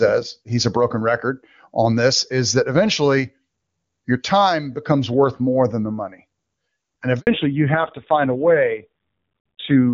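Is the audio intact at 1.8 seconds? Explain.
Yes, the speech at 1.8 seconds is intact, with no fault at that moment.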